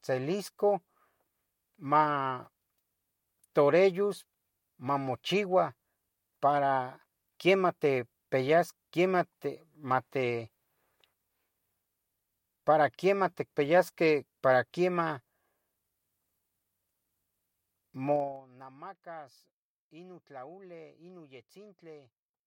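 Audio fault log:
18.12–18.44 s zipper noise: the level falls by about 20 dB in unsmoothed 3 dB steps, around thirty per second. Each step leaves a small click, so this fade ticks audibly over the speech.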